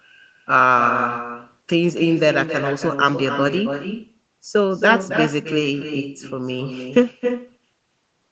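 Throughout the clip, the speech carries an echo with no canceller. Every phrase is followed roughly 300 ms later by a second copy about 8 dB below the direct sound. That copy is thinner, the sound of a loudspeaker being picked up by a microphone in a room at the far end and sent back over the link without echo cancellation. The repeat is band-limited like the rest of the call audio, which has nothing above 8 kHz.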